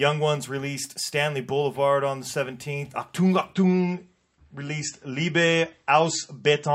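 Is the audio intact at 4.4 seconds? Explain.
No, 4.4 s falls inside a drop to a lower-bitrate adaptive stream that runs from 3.53 s to the end. The connection slowed, so playback switched abruptly, with no gap, to a leaner encode, which fits roughly 33 kbit/s MP3. Codec artefacts rise and nothing remains above 8 kHz.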